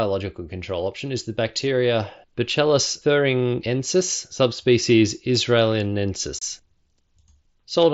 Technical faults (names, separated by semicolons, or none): unconcealed Bluetooth headset packet loss